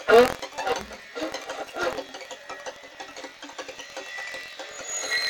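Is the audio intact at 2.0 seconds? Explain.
No. Buffer tearing runs through the whole clip, 2.0 seconds included. Writer and hardware reader have slipped, so a small slice of each buffer holds music about a tenth of a second old. Its hard joins make a steady 43.1 Hz rattle, which fits a 1024-sample buffer.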